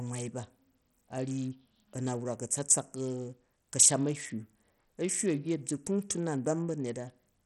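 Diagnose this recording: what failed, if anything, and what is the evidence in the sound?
Codec stage, likely Bluetooth SBC compression: the speech is gritty throughout with nothing above 13.7 kHz, which fits a starved bit pool near 64 kbps.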